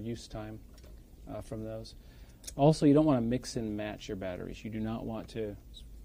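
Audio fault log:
Nothing to log here, as there's no fault to be heard anywhere in this audio.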